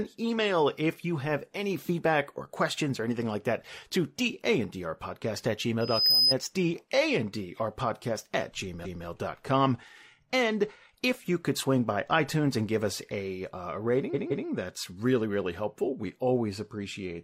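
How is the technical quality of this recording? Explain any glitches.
The recording has two kinds of glitch: a brief feedback squeal and two stutters caused by repeated frames.

From 5.81 to 6.34 s there is loudspeaker feedback squeal. A microphone is picking up a loudspeaker it feeds, and at 5 kHz the loop gain exceeds one, so that tone feeds on itself. It swells over roughly a third of a second into a piercing whistle, reaching about 10 dB above the speech.

Repeated frames cause stutters at 8.81 to 9.02 s and 14.10 to 14.44 s. A run of compressed frames was delivered more than once, so the decoder replays the same stretch of speech. At 8.81 s a 213.3 ms block plays one extra time. At 14.10 s a 170.7 ms block plays two extra times, which adds 341.3 ms.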